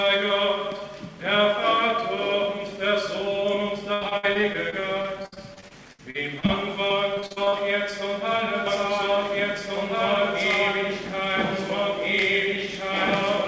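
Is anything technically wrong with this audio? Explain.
Yes, two kinds of fault are present.

From 3.94 to 6.50 s and again from 6.88 to 7.54 s there is repeated packet loss (robotic sound). Lost packets, the longest about 71 ms, are patched by stretching the previous sound, so the audio turns choppy, with pieces missing. On a spectrogram this shows as smeared, repeated frames broken by vertical seams.

From 8.67 s to the end there is a doubled audio track. A second, equally loud copy runs about one and a half seconds behind, likely from a second capture path or a misaligned edit. The waveform shows each shape repeated at that fixed offset, with no decay or reverberant tail.

Throughout, the spectrum stops at 8 kHz, which fits the wideband call codec the audio passed through.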